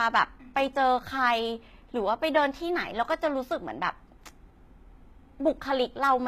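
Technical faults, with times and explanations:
Throughout, HE-AAC compression artefacts: the speech carries plainly audible coding damage, with nothing above 14.9 kHz and a synthetic, gritty treble, likely from spectral band replication rebuilding the top end from copied lower bands, which fits a bitrate around 20 kbps.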